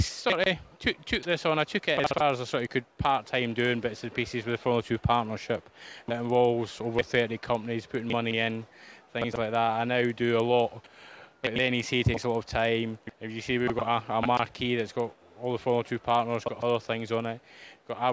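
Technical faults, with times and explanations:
Throughout, resampler restarted on every block: there's a steady tick every 50 ms, so about 20 per second. At that rate it's close to a buzz riding on the audio, and it's only there while there's signal. It sounds like a 48 kHz to 16 kHz conversion that starts fresh on each chunk. At every chunk edge the filter has silence or the wrong samples where the neighbours should be, and that small error repeats at every boundary.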